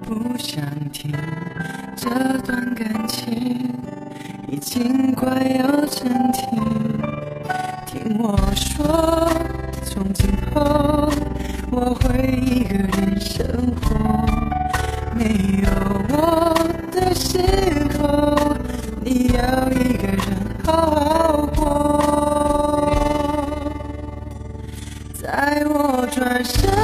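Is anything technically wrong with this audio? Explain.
Yes. Overlap-add ripple runs throughout. The frames were rejoined with an overlap that doesn't sum evenly. The level swings about 11 dB roughly 20 times a second, giving a rough, fast flutter.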